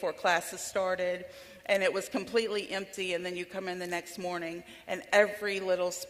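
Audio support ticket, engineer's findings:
No faults found in this clip. Nothing audible points to a problem in the playback or capture path.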